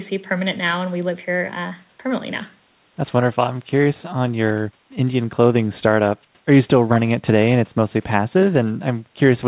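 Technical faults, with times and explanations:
No technical faults can be heard in this speech recording.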